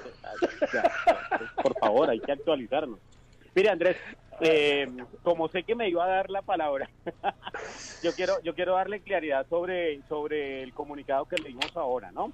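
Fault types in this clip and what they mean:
Nothing wrong turns up here; there's no fault of any kind to list for this clip.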